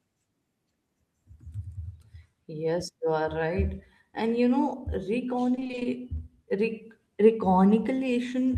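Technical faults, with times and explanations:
5.55–5.87 s, repeated packet loss (robotic sound): packets were lost or arrived late again and again over this third of a second, and each hole was covered by stretching the last good sound forward. The dropouts are brief, none longer than 20 ms, which points to around eight missing packets, and patching fills half the stretch. The speech turns choppy as the repeated fragments replace real sound.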